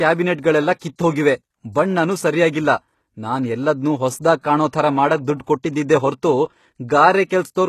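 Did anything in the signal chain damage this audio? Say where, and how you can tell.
Yes, at the codec stage, throughout the speech. The spectrum stops dead at 12.3 kHz, and s sounds come out plainly gritty and metallic, which is the likely signature of HE-AAC compression at a low rate, on the order of 16 kbps. Spectral band replication copies lower bands upward and shapes them only coarsely, so the rebuilt treble's harmonics don't line up with the real ones. That sets it apart from a plain low-pass or band-limited codec, which would dull the treble rather than roughen it.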